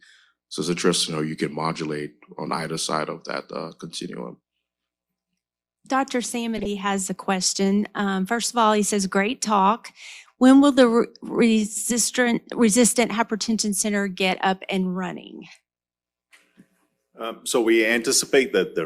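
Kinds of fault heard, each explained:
Corrupt frame decoded: A brief blip at 2.90 s, right after "can modulate on either", and a louder, longer chirp-like burst from 6.58 to 6.68 s, just before "has a question". Bits in the compressed stream were flipped, and the decoder played the damaged frames anyway. The misread codes and gains put energy at the wrong frequencies. The first blip spans a couple of frames. The second, much stronger burst spans a few.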